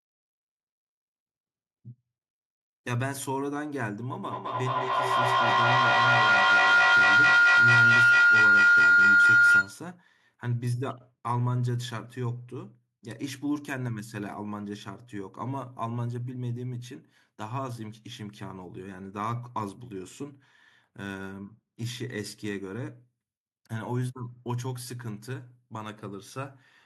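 From 4.23 s to 9.90 s the speech is overtaken by feedback howl: sound leaves a loudspeaker, re-enters a microphone in the same room and gains level on each trip. It narrows to a shrill tone around 1.5 kHz, pulsing roughly every fifth of a second, and peaks about 12 dB above the speech. Unlike ordinary echo, whose repeats fade, these grow louder and tonal until the loop breaks.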